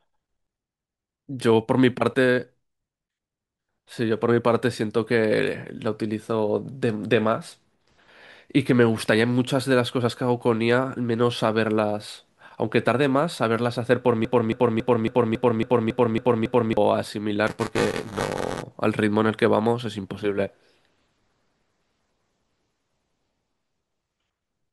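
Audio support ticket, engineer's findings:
Broken-record loop, 14.25 to 16.77 s: a 276 ms chunk of speech repeats nine times back to back with identical joins, and whatever should have played there is gone. Likely a stalled player or stream that kept re-sending its last held fragment.

Buffer tearing, 17.47 to 18.63 s: steady robotic buzz at 345 Hz, only while speech is present. That rate fits a 128-sample buffer. Writer and hardware reader have crossed in the ring buffer, so roughly 15% of each period carries audio about 10 ms stale, with hard edges both sides.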